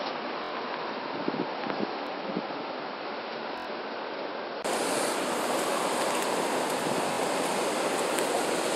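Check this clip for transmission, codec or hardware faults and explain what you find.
Two faults turn up here: an input device switch at the start and a run of repeated-buffer stutters scattered through the clip.

From 0 to about 4.65 s the sound is duller, quieter and noisier, which is most likely an input switched to a poorer device. Nothing gets through above 5.6 kHz, the level sits about 10 dB lower, and there's a noise floor roughly 35 dB down. A 20 ms gap marks the changeover back to the clearer input.

Then there are five short stutters, each a repeated buffer, at 0.44–0.51 s, 2.07–2.09 s, 3.58–3.67 s, 5.74–5.76 s and 7.13–7.18 s. Fresh audio didn't arrive in time, so the last 23 ms chunk played again, one to four extra times, which fits a 1024-sample buffer. You hear a quick rattle with hard edges at each join.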